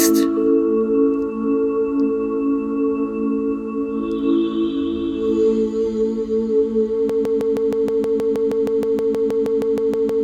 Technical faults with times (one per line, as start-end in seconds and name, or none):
7.09-10.24 broken-record loop